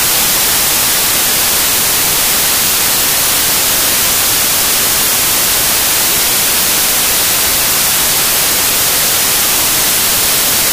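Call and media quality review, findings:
Samples built from the wrong bytes, whole clip. Loud broadband white noise. Decoder or file reader misassembling bytes: low bits land as high. Unlike added hiss, the noise level follows the signal.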